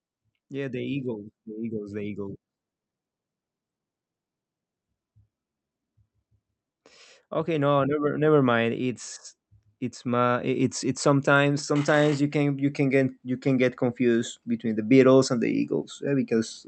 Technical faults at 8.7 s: automatic gain rising

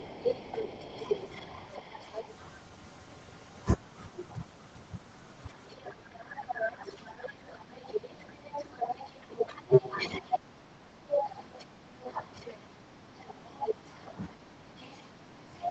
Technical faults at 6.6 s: speech suppressed in double talk

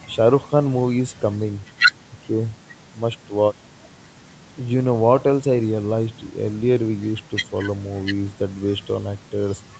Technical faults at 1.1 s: none

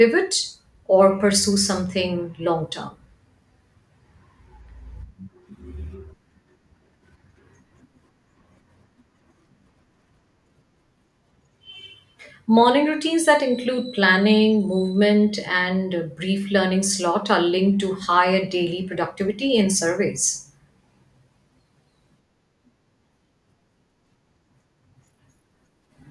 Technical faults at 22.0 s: none

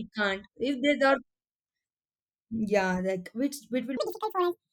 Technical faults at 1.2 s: none

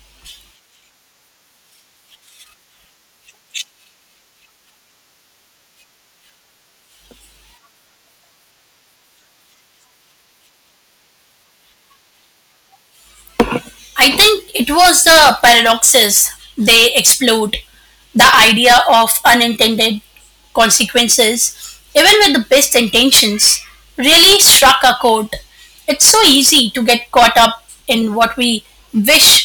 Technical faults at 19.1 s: hard clipping

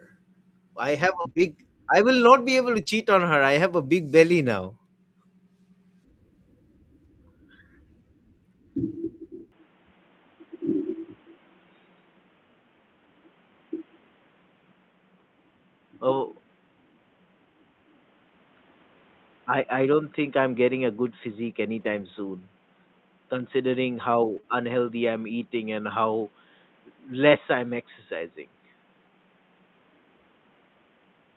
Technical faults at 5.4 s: none

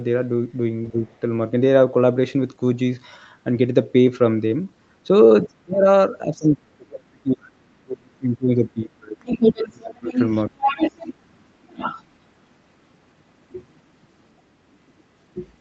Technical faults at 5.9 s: speech suppressed in double talk

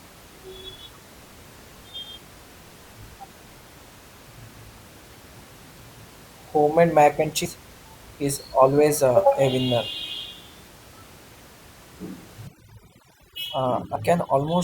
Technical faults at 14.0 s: overdone noise removal; compressed frames skipped

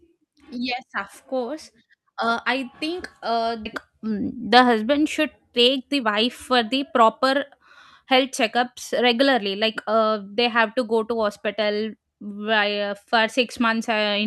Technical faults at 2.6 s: none

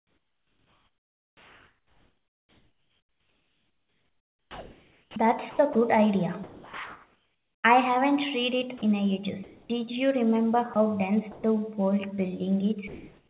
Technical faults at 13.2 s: comfort noise in place of the background

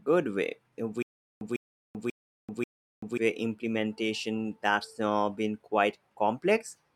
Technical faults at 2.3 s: stutter with silent gaps

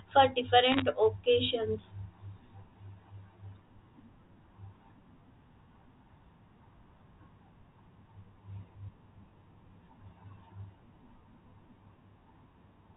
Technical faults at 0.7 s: bit errors on a digital phone line

